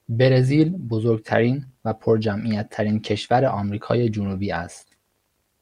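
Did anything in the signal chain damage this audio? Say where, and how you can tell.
No, there's no audible point in the chain where this speech recording was damaged.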